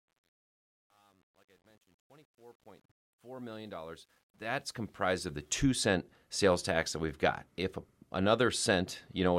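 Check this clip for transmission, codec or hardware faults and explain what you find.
One fault stands out: truncation distortion on a fade, across the fade-in from 0.0 to 5.63 s. The gain stage keeps too few bits without dither, roughly consistent with about 10-bit resolution, so from 0.0 to 4.21 s the quietest part turns gritty. The waveform shows staircase steps, and the spectrogram shows broadband grainy speckle rather than a clean rising trace. Past that, the distortion is less severe but continues to 5.63 s.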